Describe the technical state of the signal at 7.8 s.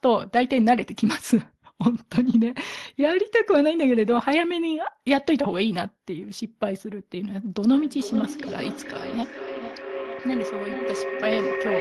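At 7.8 s a tonal howl near 400 Hz is building, pulsing roughly every 400 ms and peaking about 7 dB below the speech. This feedback howl runs from 7.7 s to the end, as two devices in one room recirculate sound with gain on each loop.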